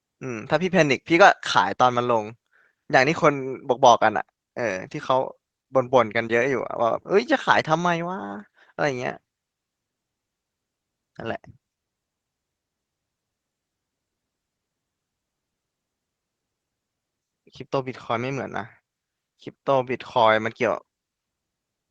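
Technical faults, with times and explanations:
Nothing stood out on listening to this speech recording, which came through a call link.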